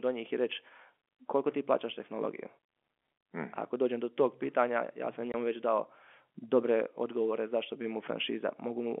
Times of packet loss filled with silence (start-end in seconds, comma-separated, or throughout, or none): 5.32